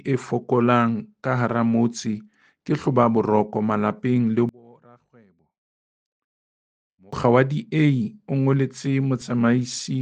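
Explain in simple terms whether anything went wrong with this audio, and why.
From 4.49 to 7.13 seconds the sound suddenly drops away to a faint trace, as if most of it had been pulled out, then returns to full strength. The likely cause is one channel inverted: one side of the stereo pair has been flipped upside down, so when both sides are combined, everything they share cancels out. What remains is only the small difference between the two sides.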